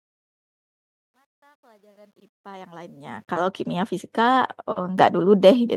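At 4.98 s there's a microphone volume step-up: the input gain on the device jumps about 7 dB in one go, so voice and background noise get louder together, abruptly.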